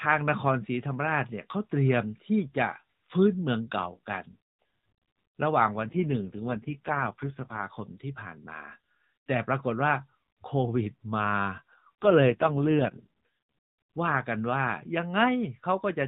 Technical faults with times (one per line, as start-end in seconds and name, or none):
5.82-7.65 AMR rate drop
12.02-13.25 AMR rate drop